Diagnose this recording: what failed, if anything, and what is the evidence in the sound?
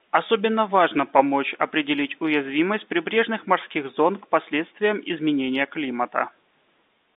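Nothing failed in this recording; there is no fault to diagnose.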